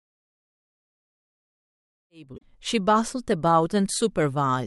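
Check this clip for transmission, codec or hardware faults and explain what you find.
There's one fault, and the fade-in around 2.7 s isn't it. From 2.34 to 2.43 s there's damaged data in the compressed stream: the decoder hits corrupted frames, loses sync and hunts for the next header, so you get a short glitch.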